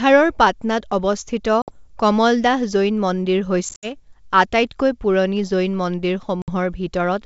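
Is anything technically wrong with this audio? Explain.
Yes. There is packet loss on an ADPCM call, over wideband speech that fits G.722. Gaps fall at 1.62 to 1.77 s, about 60 ms lost, just before "কমলদাহ জৈন মন্দিৰ". At 3.69 to 3.96 s, after "অৱস্থিত কমলদাহ জৈন মন্দিৰ", 100 ms is scattered over 140 ms, the longest run 70 ms. At 6.42 to 6.49 s, about 60 ms is lost. Each hole is hard-edged silence. The decoder's predictor and step size then disagree with the sender's, so speech returns with brief distortion, settling within tens of milliseconds.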